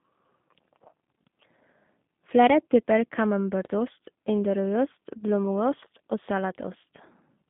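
Speech carrying G.729 codec damage throughout: nothing above 3.7 kHz, band roughly 150 Hz to 3.5 kHz, plus a rough, synthetic buzz from low-bitrate pulse modelling that plain telephone filtering wouldn't add.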